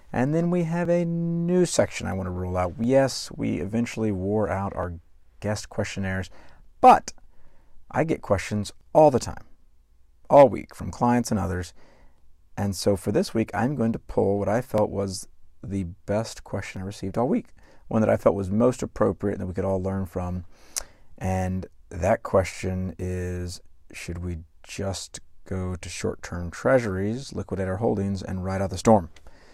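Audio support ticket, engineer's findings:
Overlap between stream segments: short micro-skips in the speech at 0.85, 2.84, 4.83, 8.81, 10.80, 14.78 and 16.77 s, each roughly 5 to 16 ms of audio lost. Falls on a 2 s grid, matching the segment length. E.g. between "want to rule out" and "we eventually wore out" at 2.84 s. Probable component: segmenter/player join logic. Mechanism: overlapping segment timestamps; the player trims the overlap, drops real audio, and the waveform jumps.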